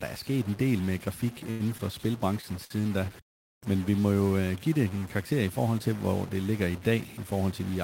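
A distortion sits on this speech recording from start to finish, and the pauses between phrases are filled with noise instead of falling silent. That combination points to a stuck bit, most likely one data line or converter bit held at a fixed value. Roughly half the samples end up off by that bit's weight, so the error follows the waveform's shape, and near zero it flips with the sign and turns quiet gaps into hiss. The speech also briefly freezes three times, each a short stall from a late packet. Sound is held from 1.51 to 1.62 s for about 89 ms, from 1.78 to 1.81 s for about 17 ms, and from 2.65 to 2.72 s for about 57 ms, with a slight buzz or dip each time. In each case the jitter buffer ran dry, so the receiver stretched the last sound until the packet arrived and then resumed from the same point. Nothing is lost, but playback falls a little further behind after each stall.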